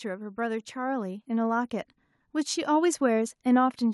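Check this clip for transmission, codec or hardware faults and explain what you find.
One hardware-side fault is audible. From 0.35 to 1.78 s, automatic gain rising occurs: the gain control judged the input too quiet and raised its gain by about 6 dB over roughly 1.4 seconds, so the speech and the background noise swell louder together.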